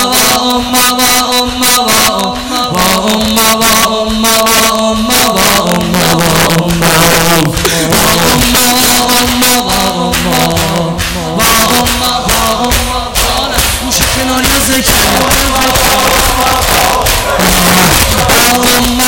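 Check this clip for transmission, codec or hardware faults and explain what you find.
Two faults are audible: integer overflow throughout the clip, and a regular click pattern from clock drift buffer slips.

Integer overflow, throughout: loud peaks burst into harsh, violent cracks, far sharper than ordinary clipping. The signal is driven about 9 dB past full scale, so a few percent of samples exceed the integer limit and wrap to the opposite sign instead of being held at the maximum.

Clock drift buffer slips, from 0.70 s to 18.65 s: a click or pop repeats every 1.28 s, about fifteen times in all. The likely cause is two devices running on separate clocks that disagree by roughly 500 ppm. The buffer between them gradually overfills or runs dry, and a block of a few tens of samples is dropped or repeated at each slip.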